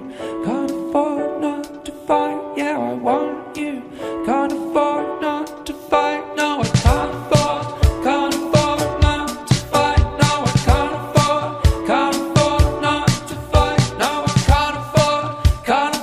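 No audible faults anywhere in the audio.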